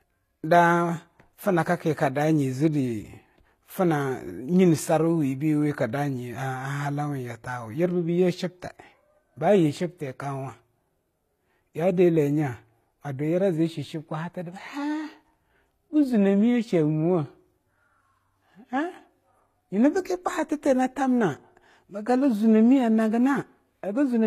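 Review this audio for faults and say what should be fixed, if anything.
Transcoding between lossy codecs runs throughout, likely Vorbis re-encoded as low-rate HE-AAC; a spectrogram shows a hard 14.9 kHz ceiling with blotchy, smeared upper bands. Prevent it by encoding once from the original uncompressed source instead of converting one lossy file into another.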